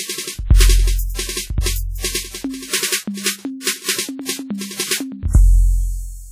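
Throughout the music there is heavy transform-codec damage, likely from WMA compression. Sustained sounds ring and smear over tens of milliseconds, and a washy hiss swells with the signal. Weak detail drops out, which fits roughly 32 kbps. Nothing sounds above 19.3 kHz.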